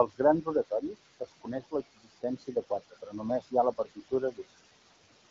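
From the start, noise suppressor artifacts run through the whole clip. The suppressor pulls down every band it judges to be steady noise, by about 18 dB, frame by frame. The room noise, which sits about 13 dB below the speech, drops away in the gaps and comes back up under the talking, so the background pumps with the speech. The band limit near 7.5 kHz and the light coding texture fit an HD Voice codec working as intended.

Speech cut by the noise suppressor occurs five times: 1.2 to 1.48 s, 1.95 to 2.71 s, 2.9 to 3.2 s, 3.72 to 4.12 s, and 4.31 to 4.4 s. In each window the suppressor mistakes quieter speech energy for noise and turns it down with the background, by about 15 to 21 dB at the deepest point. Only a tenth to a fifth of a second in each window is actually affected, so the damage lands on brief pieces such as soft consonants and trailing sounds, which come across as swallowed or faint.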